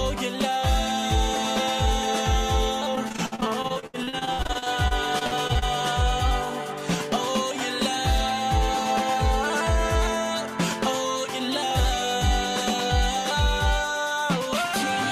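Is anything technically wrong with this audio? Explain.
Yes. Between 2.95 and 5.64 s there is repeated packet loss, heard as robotic sound. Data arrived missing or too late many times in quick succession. Each hole was patched by stretching the preceding audio, with gaps up to 71 ms long. About 0.76 s of the span, roughly 28%, is filled-in material. The sound turns choppy there, with small pieces missing and a robotic texture from the constant patching.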